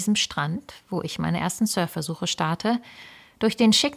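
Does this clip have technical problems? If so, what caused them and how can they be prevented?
No, nothing technical jumps out in this speech clip, so there's nothing here that needs preventing.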